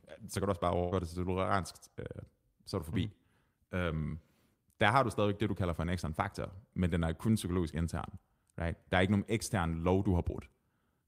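At 0.79 s, right after "kan du også bare", a burst of packet loss removes roughly 120 ms of speech, ending at 0.94 s. The receiver bridged the hole by stretching the last sound, so about 120 ms of it comes out as a held, fading sound before the speech jumps ahead to "det til toleransk øh". On a spectrogram the continued sound runs on unchanging while dimming, and the waveform shrinks in amplitude.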